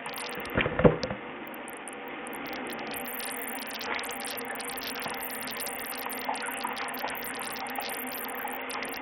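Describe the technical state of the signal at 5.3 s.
At 5.3 s the sound carries heavy coding damage, likely from Bluetooth SBC compression, and it is present throughout rather than only at that moment. The upper range is thin and flickers in and out, with a gritty, rough noise and aliased tones clinging to what remains. That fits a codec splitting the signal into a few wide bands and starving the top ones of bits, at a low rate near 48 kbps.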